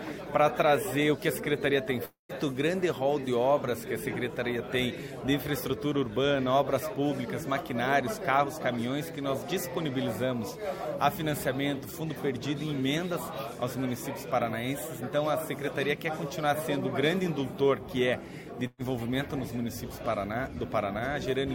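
At 2.05 s the sound smears into a fading buzz or hiss, drops to silence, then resumes at 2.32 s with about 240 ms gone, likely a long network dropout. Then at 18.67 s there's a burst of packet loss: the last sound is held and faded for roughly 120 ms before picking up again at 18.82 s, skipping ahead.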